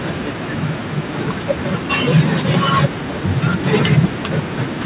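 Nothing goes wrong anywhere in this bit of speech, and the way it stops dead at 4 kHz, with that phone-line grain, just fits an ordinary G.711 mu-law call path at 64 kbps doing its normal job.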